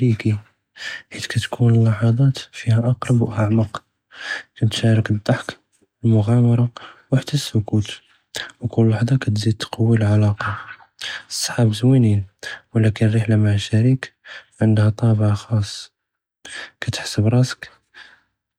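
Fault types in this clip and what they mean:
No faults can be heard anywhere in this recording.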